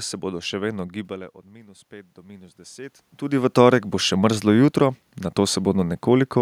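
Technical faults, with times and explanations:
1.07–3.59 s, automatic gain rising: after "se bodo še vedno" the level at the microphone drops by about 20 dB, and the gain control slowly adds about 9 dB over 2.5 s, so voice and room noise swell together until "torek bo še mrzlo".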